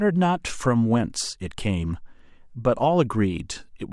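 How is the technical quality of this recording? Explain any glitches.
Nothing stood out as a technical problem when listening to this speech recording.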